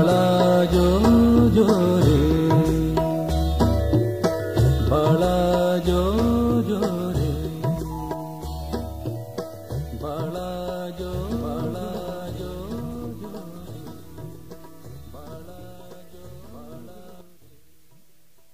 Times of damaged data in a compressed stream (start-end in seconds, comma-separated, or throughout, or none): none